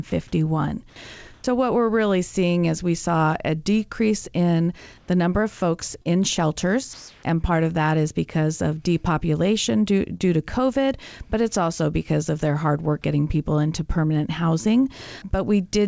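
Speech heard through a call codec whose spectrum stops at 8 kHz, which fits G.722, shows comfort noise in place of the background at 1.34–1.44 s, 4.98–5.08 s and 6.93–7.23 s, just before "and part of that". Each pause loses its real room texture to smoother synthetic noise, about 9 dB quieter, about 2 dB quieter and about 5 dB louder respectively. On a spectrogram these look like smooth, structureless blocks, likely from discontinuous transmission with synthetic noise filling the silence. Short concealed packet loss occurs at 6.02–6.07 s, after "number of folks", and at 10.17–10.22 s, after "because of depopulation due". About 40 ms and 20 ms went missing, and the gaps were patched by extending the preceding sound, giving a brief smear.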